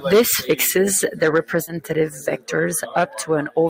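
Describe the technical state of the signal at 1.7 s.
At 1.7 s there is a brief smear where the speech briefly loses its edges, running from 1.63 to 1.70 s. This is short concealed packet loss: about 40 ms never arrived, so the receiver extended the preceding sound to bridge the gap before rejoining the real signal.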